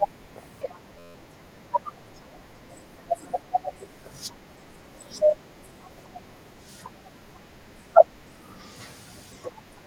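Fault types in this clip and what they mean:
System hang loop: from 0.99 to 1.15 s the speech freezes into a single tiny slice of audio, 11.61 ms long, repeated 14 times. The system stalled while the sound hardware kept replaying the same ring buffer, and a piece that short fuses into a steady buzz at about 86 Hz rather than a stutter. The loop length fits a 512-sample buffer, and little or no speech is lost when playback resumes.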